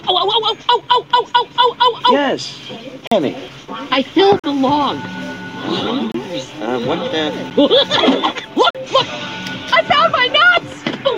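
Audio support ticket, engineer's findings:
Block of digital silence, five events: abrupt holes, no fade. 3.07–3.12 s, 4.40–4.44 s and 8.70–8.75 s are identical 43 ms gaps, which fits a 2048-sample buffer left unfilled. 6.12–6.14 s is a shorter 26 ms hole. 7.50 s is a 9 ms tick. Probable component: output render path missing its deadline and emitting zeros, or invalid values in processing being zeroed.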